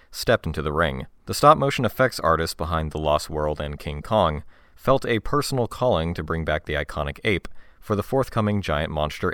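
No technical faults can be heard anywhere in the speech recording.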